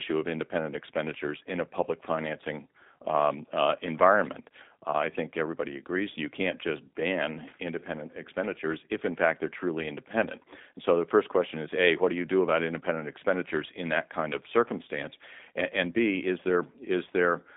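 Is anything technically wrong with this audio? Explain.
Yes, the speech runs through the G.729 codec throughout, rebuilt from a filter, pitch predictor and sparse pulses, so it sounds rough and synthetic. A spectrogram shows a hard ceiling near 3.7 kHz, which fits an 8 kbit/s G.729A link.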